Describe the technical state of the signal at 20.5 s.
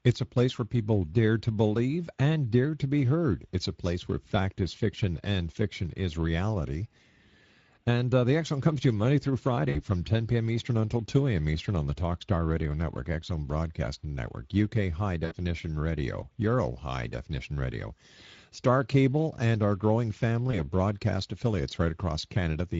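At 20.51 s a stretch of audio went missing in transit, and the Speex decoder covered the gap with VoIP packet loss concealment. It repeated its last pitch and spectral envelope while lowering the gain. The dropout itself sounds like a single lost 20 ms frame, but because each decoded frame builds on the previous one, the disturbance lasts until about 20.67 s. Over that span the speech turns into a short stretched, fading smear and then sounds weak and distorted before the decoder settles again.

Underneath that, the whole signal is carried by the Speex codec, and the damage is plainly audible at this moment too. The character of the coding suggests a mid-range setting of roughly 16.8 kbps. At that rate the CELP coder has too few bits to describe the excitation accurately, so the speech comes out grainy and hoarse instead of clean. Any content above 8 kHz is replaced by a shaped noise fill.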